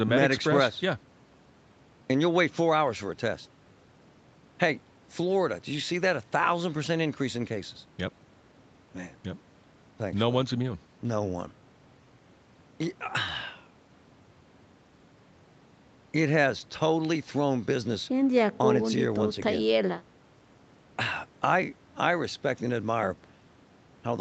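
No faults are present in the speech; the audio carries the expected signature of a call path, with nothing above 8 kHz, which fits a wideband Opus stream.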